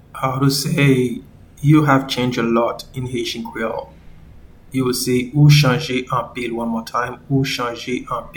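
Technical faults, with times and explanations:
No technical faults are audible anywhere in the audio, with the signal holding steady throughout.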